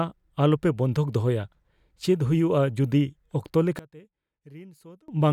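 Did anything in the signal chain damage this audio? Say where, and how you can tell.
Yes: from 3.79 to 5.08 s the speech drops about 24 dB, most likely one channel inverted in the wiring, cancelling the centre when summed to mono.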